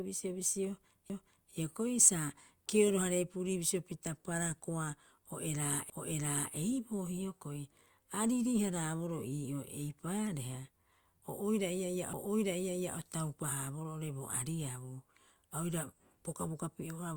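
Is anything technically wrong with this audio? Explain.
Yes, there are two CD skips in the speech. At 1.09 s, just before "hioko'i sa", and at 5.90 s, right after "hararepurii bisio pita parakoa", the laser jumps to another turn of the disc spiral. The player mutes briefly, a few milliseconds and then roughly 15 ms, heard as a tick before playback resumes from a displaced point.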